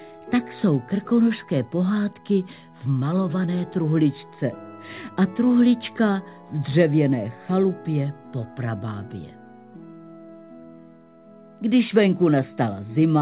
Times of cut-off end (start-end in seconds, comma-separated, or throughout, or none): none